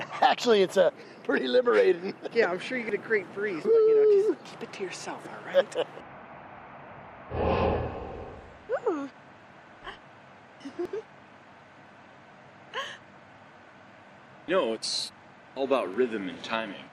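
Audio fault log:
2.89 s, 10.85 s, 14.83 s: audio missing between chunks. Each is a brief skip of around 20 ms, butted together with no silence, spaced at multiples of 4 s, likely from chunked recording. The waveform shows an abrupt join with no gap; the spectrogram shows a sudden discontinuity.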